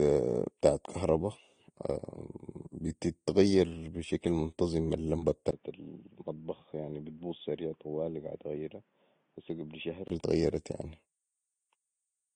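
Throughout the speech, transcoding between lossy codecs leaves the mixed artefacts of both codecs heard together and a hard ceiling at 9.6 kHz, likely from Vorbis then AAC-LC encoding; spectrograms show an empty band above it.

After "بتتغير بشكل منتظم المبه", at 5.51 s, a 20 ms gap likely marks an input switched to a poorer device. The band narrows to 3.8 kHz and the level drops about 10 dB, with faint new background noise. It recovers at 10.10 s, before "اتغيرت يعني".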